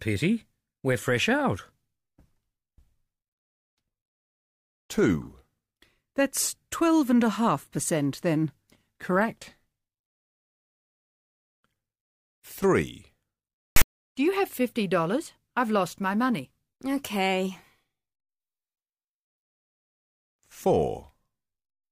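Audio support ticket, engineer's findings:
File tags played as audio, 13.76–13.84 s: parser reading tag block as samples. Text bytes give a loud one-sided rasp, zero padding drops to silence; hard-edged burst.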